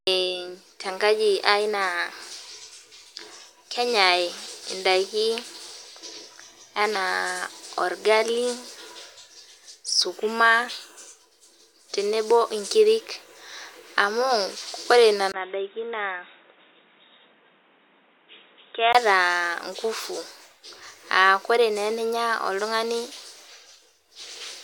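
At 15.32 s the speech drops out for about 20 ms, then returns dull and boxy, with nothing above 3.8 kHz, a few dB quieter and over a new background noise. It clears again at 18.95 s, likely an input switched to a poorer device.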